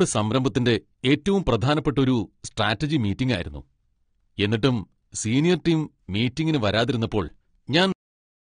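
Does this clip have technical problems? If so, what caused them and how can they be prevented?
Yes. AAC compression runs throughout: nothing sounds above 9.7 kHz, with a dull, smeared, warbling texture, likely from AAC-LC coding at a low bitrate such as 32 kbps. Encoding at a higher bitrate, or keeping an uncompressed master, would prevent it.

Cut-off end at 7.92 s: the final buffers were never written, so the speech stops mid-sound and drops straight into digital silence with no decay. Letting the recorder flush its buffers before closing the file would prevent it.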